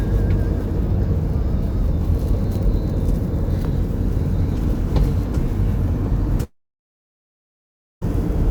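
At 6.43 s the audio breaks off, and nothing returns until 8.03 s. This is a long network dropout. For about 1.6 s no sound arrives. The receiver first stretches the last sound into a brief buzz that fades within about a tenth of a second. Then roughly 1.5 s of silence follows. When the audio resumes at 8.03 s, it jumps ahead, and the lost stretch is never heard. The likely cause is a gap in packet delivery.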